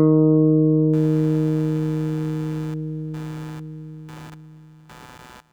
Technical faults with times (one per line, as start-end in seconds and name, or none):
0.93-5.53 computer activity noise